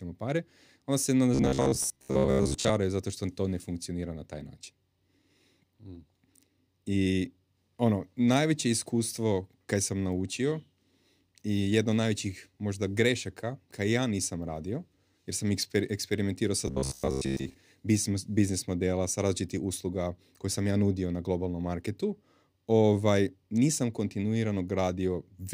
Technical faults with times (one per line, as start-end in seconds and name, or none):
1.35-2.71 robotic sound from repeated short buffers
16.68-17.54 robotic sound from repeated short buffers